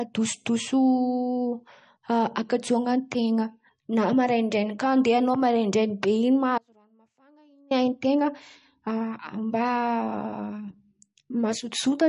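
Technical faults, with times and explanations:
Throughout: MP3 compression, likely at a low bitrate; nothing above 10.6 kHz, and weak detail swirls audibly, giving a watery, smeared quality to the speech.
6.58–7.71 s: audio dropout to a faint residue; speech vanishes abruptly for about 1.1 s, leaving only faint sound about 35 dB down, likely a lost signal path.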